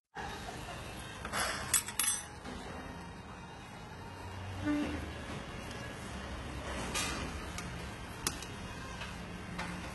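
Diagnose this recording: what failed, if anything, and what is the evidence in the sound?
HE-AAC compression, throughout the clip, at the codec stage. The treble is gritty and metallic, its harmonics failing to line up with the lower spectrum, and nothing sits above 11.8 kHz. The coder carries only the lower bands properly and likely rebuilds the top by spectral band replication, copying lower bands upward under a coarse envelope. The damage is heavy, which fits a very low bitrate around 16 kbps.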